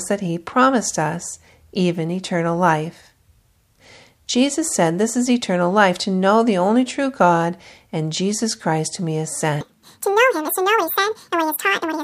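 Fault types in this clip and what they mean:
Section at the wrong speed: from 9.61 s to the end, the speech plays at twice its proper rate, so it sounds hurried and shrill, raised by roughly ten semitones. The likely cause is a stretch being played or edited against the wrong clock, so speed and pitch shift together. On a spectrogram, the harmonics and formants jump upward and spread apart at 9.61 s. On the waveform, syllables are compressed into half their length, packed more tightly.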